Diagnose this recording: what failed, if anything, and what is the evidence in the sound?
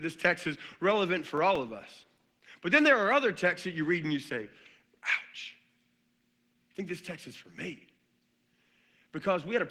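The codec stage failed: this is Opus voice compression at 16 kbps in hybrid mode. Throughout, the speech sounds hoarse, grainy and slightly robotic because SILK codes the excitation coarsely and the thin CELT layer above 8 kHz smears the top end. Unlike plain band-limiting, the full bandwidth survives but sounds roughened.

Storage or playback also failed: these are CD scratch ticks. Four very short ticks, the longest lasting about a millisecond or two, fall between 1.01 and 1.55 s at a steady rate of roughly five to six a second, once per disc revolution. Buffer-underrun clicks would be irregular and would leave audible gaps, but these are evenly paced, concealed, and confined to that half-second.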